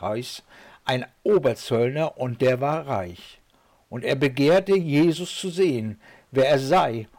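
No technical faults can be heard anywhere here.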